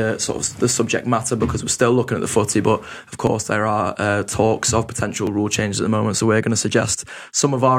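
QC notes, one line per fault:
3.27 to 7.28 s, periodic USB or driver dropouts: the bus stalls every 2.0 s, skipping a couple of milliseconds of audio each time, heard as evenly spaced ticks.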